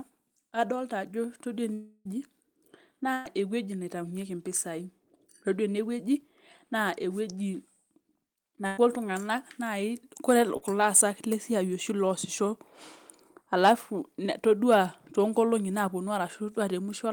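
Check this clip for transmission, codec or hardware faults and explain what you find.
Yes, the clip has network transmission faults: one long dropout, two bursts of packet loss and one short concealed loss.

From 1.73 to 2.07 s the last sound is stretched into a fading buzz for about 0.32 s, followed by a brief silence, and the speech resumes with roughly 0.32 s missing. This is likely a long network dropout, during which no packets arrived and the receiver extrapolated until it had nothing left.

At 3.13 to 3.27 s and 8.67 to 8.79 s, a burst of packet loss left gaps of 120 ms and 100 ms. Each time the receiver continued and faded the preceding sound, producing a held buzz or a fading hiss. The speech then jumps ahead with that stretch gone.

At 10.57 to 10.63 s, a short concealed packet loss removed about 40 ms before decoding. The receiver filled the hole by extending the previous sound and blending back into the real audio, which leaves a brief smear where a short sound may have been swallowed.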